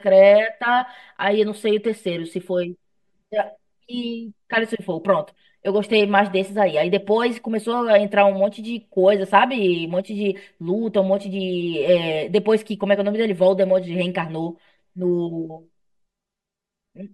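From start to end, the speech carries channel delay (comb filtering): one channel runs about 5 ms behind the other, and when the two are summed to mono, shared content cancels at evenly spaced frequencies, starting near 100 Hz and repeating roughly every 200 Hz. The result sounds hollow and phasey throughout. On a spectrogram, fixed dark horizontal bands stack at regular intervals across the whole clip, unchanged as the speech moves.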